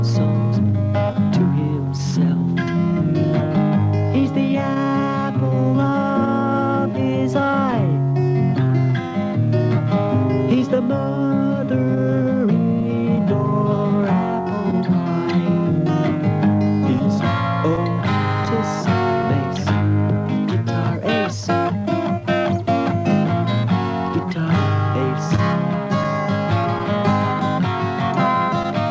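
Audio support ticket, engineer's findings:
Clock drift between sender and receiver: sender clock running slow, roughly 1.5%. Jitter buffer keeps draining, so the receiver stretches audio. Hiccups spread across the whole clip, unlike one-off loss bursts.

Repeated timing corrections, 0.64–24.42 s: jitter buffer repeating short pieces to cover the slow sender. Playback at 99% speed, roughly 200 ms added. Edits are all lengthening, unevenly spaced, heard, if at all, as slight tempo wobble rather than dropouts.

Scattered short gaps, 13.17–14.74 s, 16.99–19.25 s, 25.36–28.66 s: packets lost or late. The receiver fills each hole by continuing the last sound. About three, four and five gaps, each up to around 10–20 ms. These are brief isolated ticks or smears, not the steady tempo drift above. The G.722 path at 64 kbps tops out at 8 kHz.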